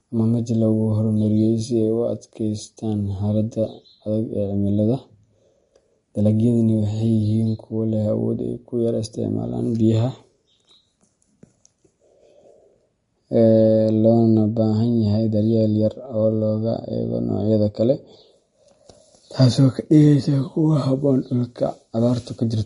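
MP3 compression, throughout: nothing is heard above 10.6 kHz, and the speech turns watery and swirly as weak frequency bands drop in and out, likely from low-bitrate encoding near 40 kbps.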